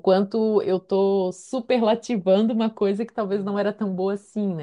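Nothing stood out on listening to this short speech recording.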